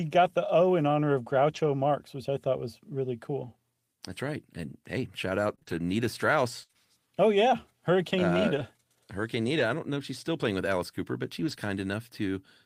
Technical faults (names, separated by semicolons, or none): lost packet rebuilt from error correction; scattered short gaps